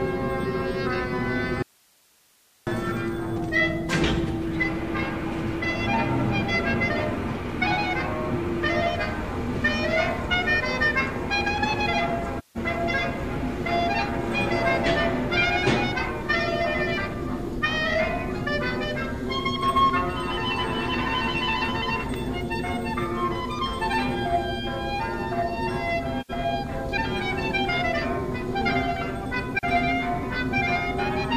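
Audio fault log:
1.63–2.67 s, audio dropout to a faint residue: the sound cuts out abruptly for about 1.04 s, leaving only faint hiss roughly 35 dB down. The path likely stayed live after the signal was lost.
12.38–12.57 s, 26.21–26.30 s, 29.59–29.64 s, AAC frame loss with muting: soft-edged holes of 171 and 85 ms and a brief dip of 43 ms, fitting four, two and one lost frames. The silenced spectrum fades out and in.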